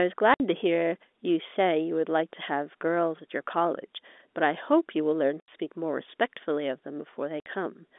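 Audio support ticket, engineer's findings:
Speech dropouts, packet loss filled with silence, at 0.34–0.40 s (60 ms), 5.40–5.48 s (80 ms) and 7.40–7.46 s (60 ms). Gap lengths are multiples of 20 ms, consistent with whole 20 ms packets missing at the receiver and zeros substituted. The waveform shows a flat line with hard vertical edges. The spectrogram shows blank full-height columns. Probable component: network path or jitter buffer. The G.711 telephone coding around the gaps is audible as band-limiting to roughly 250 Hz–3.6 kHz.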